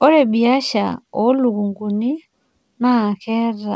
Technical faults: none

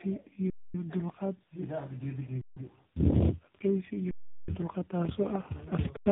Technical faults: tandem speech coding; underrun with held sample

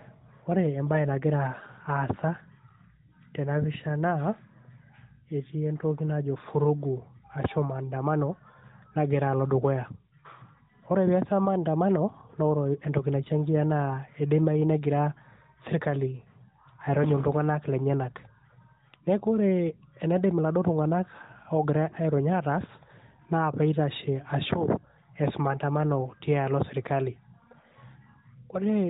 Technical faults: none

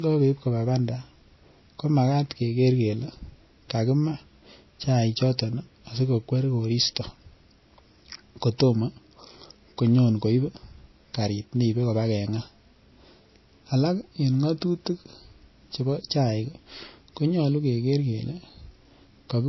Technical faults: transcoding between lossy codecs

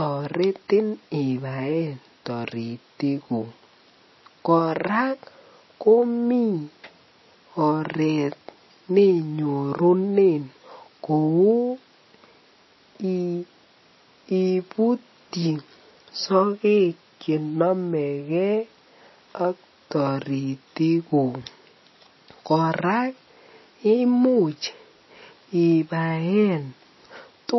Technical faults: MP3 compression

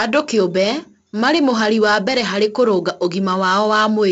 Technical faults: 4-bit ADPCM compression

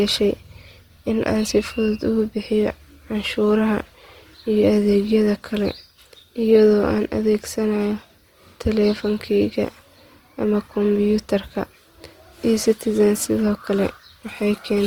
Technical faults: Opus compression

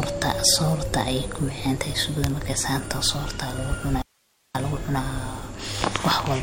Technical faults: audio dropout to a faint residue

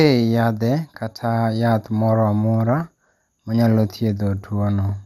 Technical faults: MP2 compression

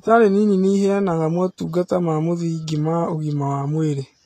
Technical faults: Vorbis compression

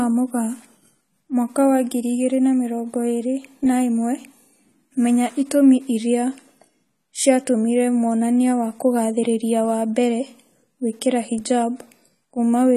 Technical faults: AAC compression

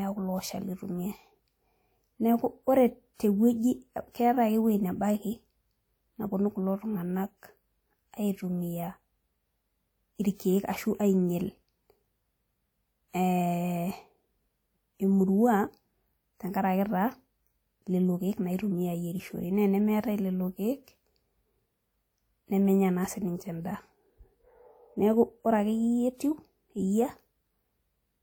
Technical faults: pre-echo

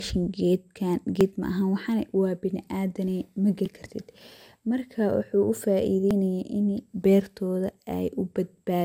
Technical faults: generation loss; audio missing between chunks

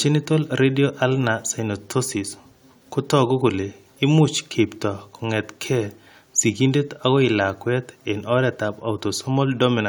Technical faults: none

